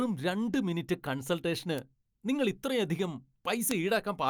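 At 1.78 s, between "രണ്ട് മിനിറ്റ് കൺസൾട്ടേഷന്" and "നിങ്ങൾ ഇത്രയധികം", a single sharp tick cuts through the speech, and a second one comes at 3.71 s, just after "മിനിറ്റ് കൺസൾട്ടേഷന് നിങ്ങൾ ഇത്രയധികം". Both are bit error spikes. A flipped bit makes the sample value leap by a power of two and snap straight back, giving a broadband click unrelated to the speech. The first sounds like one sample, and the second fits a run of about three.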